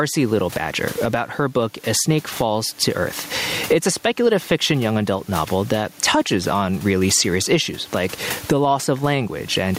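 Speech with gain pumping throughout: the gain drops sharply as soon as the talker gets loud, a swing of around 20 dB. The room noise sits about 33 dB below the speech. Loud and quiet passages sit closer in level and the delivery sounds squashed. The likely cause is input gain set far too high, with a fast limiter or compressor clamping down on each loud sound.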